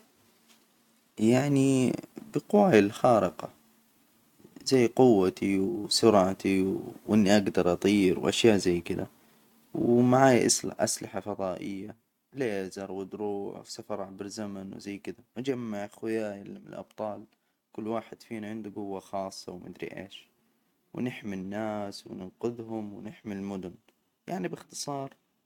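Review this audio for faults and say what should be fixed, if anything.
Nothing needs fixing, since the speech signal shows no technical faults at any point.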